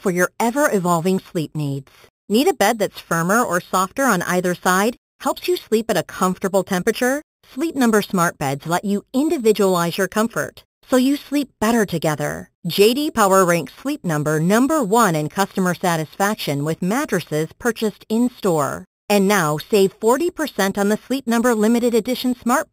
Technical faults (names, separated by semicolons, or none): imaging from sample-and-hold upsampling